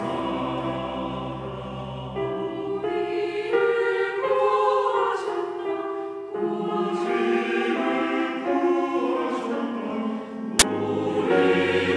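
File tags played as audio occur from 10.59 to 10.62 s, a burst of roughly 26 ms. Here the decoder has treated a block of embedded cover-picture data as if it were sound samples. Because the picture is stored compressed, its bytes are close to random, so they come out as very loud white noise. The result is a sudden, very loud crack of static with hard edges, starting and stopping abruptly and unrelated to the surrounding audio.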